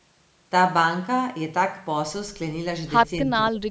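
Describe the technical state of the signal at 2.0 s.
At 2.0 s the speech is intact, with no dropout, distortion or other fault, and the only shaping is the usual call microphone processing, which trims the lowest bass and leaves nothing above 8 kHz.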